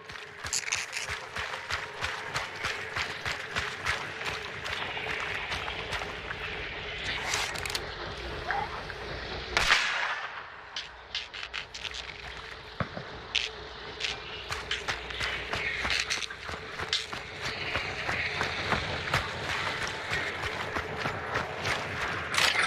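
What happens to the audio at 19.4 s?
At 19.4 s the audio plays through cleanly, with no dropout, click, distortion or other fault at that point.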